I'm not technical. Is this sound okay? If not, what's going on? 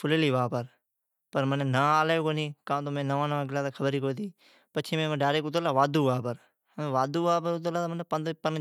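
Yes, this one's fine: nothing technically wrong turns up anywhere in the recording, so there's nothing you need to worry about.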